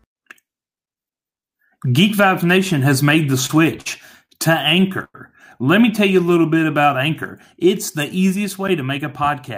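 From 3.46 to 5.16 s, just after "has made the", the speech drags and stutters through six brief holds, the longest 100 ms, that together stretch the passage by 233 ms with nothing lost. These are repeated stalls (stutter): packets arrived late, the jitter buffer kept running dry, and the receiver extended the last sound each time until audio resumed.

Between 6.11 and 6.82 s, after "me tell", the speech slows to 90% speed with its pitch unchanged, so sounds become drawn out as 79 ms is added. This jitter buffer slow-down came from the buffer running low or having just raised its target delay, with the receiver repeating single pitch periods to rebuild its reserve.

From 8.70 to 9.50 s, after "the easiest", the speech turns slightly hurried, running at 105% speed at the same pitch as about 50 ms is cut. This jitter buffer speed-up happened because too much audio had built up, and the receiver trimmed short pitch-period pieces to bring the delay down.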